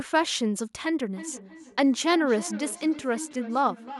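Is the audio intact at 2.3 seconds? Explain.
No. Feedback echo between two devices runs from 1.16 to 3.99 s. One device replays another's microphone, which recaptures it. Speech repeats about every third of a second, about 15 dB down.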